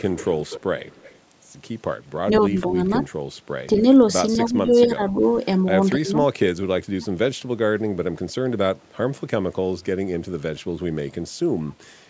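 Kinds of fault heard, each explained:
Echo leak: A faint delayed copy of the speech trails the direct sound by about 248 ms, most likely far-end audio that a loudspeaker sent into the microphone and the echo canceller failed to fully remove. It runs through the first 1.2 s at about 20 dB down, with brief scraps near 2.4 s and 11.7 s. On a spectrogram it shows as weak, smeared repeats of harmonic patterns, shifted right by a quarter second.
Speech suppressed in double talk: The speech briefly dips or partly drops out at five points between 2.3 s and 7.1 s, the deepest drop by roughly 25 dB near 6.0 s. This is likely an echo canceller that could not separate the local talker from the loudspeaker echo while both sides were active, so it attenuated everything. The waveform shows sudden notches in the envelope. The spectrogram shows short vertical gaps or thinning, especially in the upper bands.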